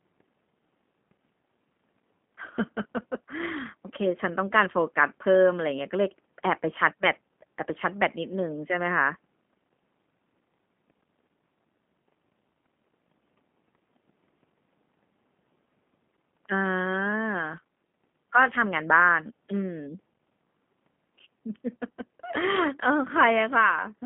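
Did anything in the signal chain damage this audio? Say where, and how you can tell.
Yes, at the codec stage, throughout the clip: G.729 codec damage. Nothing above 3.5 kHz survives, the speech sits in a 150 Hz to 3.4 kHz telephone band, and it sounds audibly rough and synthetic. That fits an 8 kbit/s G.729A encode rebuilding speech from a filter, pitch predictor and sparse pulses.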